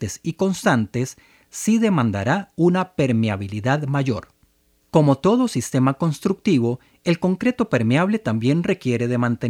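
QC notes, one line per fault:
No technical faults can be heard anywhere in the signal, so it needs no action at this stage.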